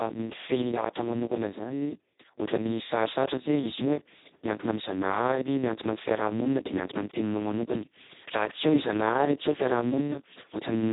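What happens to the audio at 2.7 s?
At 2.7 s the speech carries Speex codec damage, which runs through the entire clip rather than starting there. The sound is hoarse, buzzy and partly robotic, consistent with a setting of roughly 2 kbps, where almost no bits remain for the excitation and the CELP coder behaves close to a vocoder. Nothing is present above 3.8 kHz, so the speech is also dull and band-limited, lacking crisp sibilants.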